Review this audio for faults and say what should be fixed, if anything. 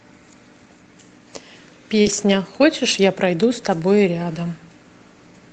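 At 2.01 to 2.07 s there is a short concealed packet loss. About 40 ms never arrived, and the receiver filled the gap by extending the preceding sound before blending back. Unlike error-correction recovery, this fill is invented, so it sounds like a smear or wobble.

Overlapping it, from 2.05 to 2.23 s, is a lost packet rebuilt from error correction. Over about 100 ms, several lost packets were replaced by low-bitrate copies carried in the following packets. There is no gap, but the sound turns rougher and noisier. It is not frozen or smeared the way concealment is. The Opus call path stays band-limited to 8 kHz throughout, so there is no extra dip in the highs here.

Both come from packet loss in the network. Reducing loss on the link, and letting the jitter buffer hold a little more delay, would prevent them.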